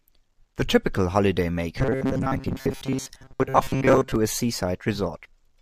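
From 1.79 to 4.16 s there is robotic sound from repeated short buffers. The speech becomes a rigid metallic buzz at 133 Hz. It likely comes from a 7.5 ms chunk looping over most of the real audio.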